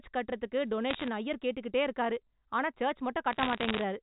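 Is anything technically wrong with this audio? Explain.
Yes. Bit errors on a digital phone line, from 0.9 to 1.08 s and from 3.33 to 3.81 s, flip bits in individual samples at around one percent, producing sharp ticks and crackle over the speech.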